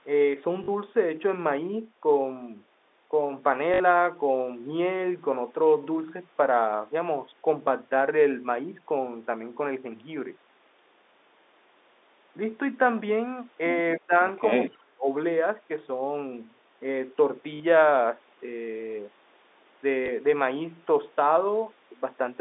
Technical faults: packet loss with last packet repeated; speech suppressed in double talk

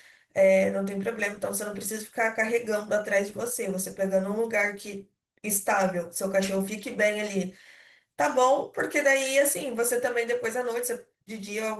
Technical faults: Opus voice compression

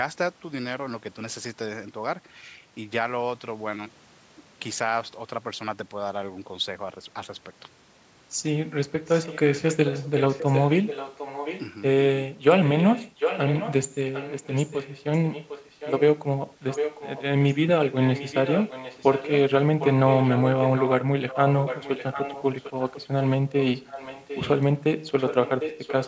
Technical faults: echo leak

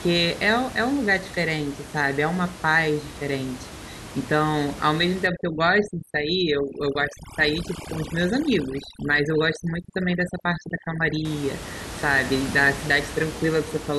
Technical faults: overdone noise removal

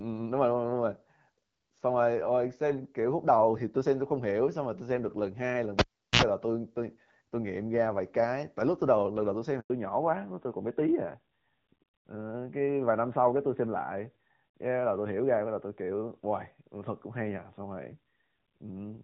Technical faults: cable pulled and plugged in; handover gap; fallback to narrowband

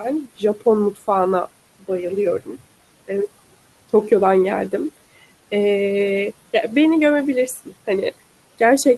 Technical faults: speech cut by the noise suppressor

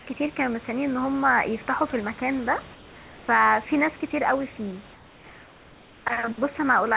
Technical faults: comfort noise in place of the background

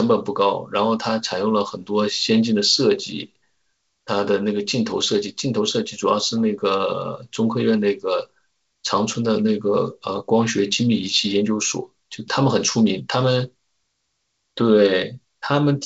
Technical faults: none

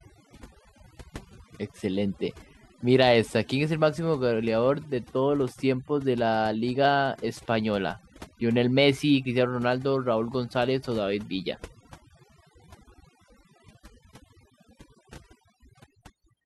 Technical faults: overdone noise removal

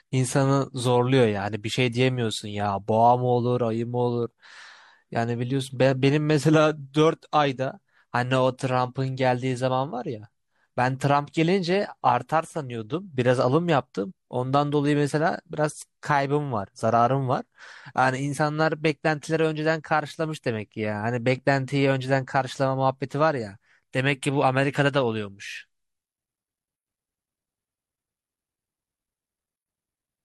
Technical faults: none

